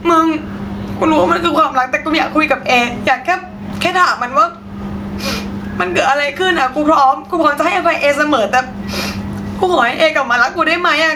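Throughout the speech, the level is pulled down on each loud sound. Loud and quiet syllables sit closer together in level, giving a flattened, squashed sound. This gain pumping, with the level swinging by around 15 dB, is likely caused by the input gain being set far too high and a fast limiter clamping down on each loud sound.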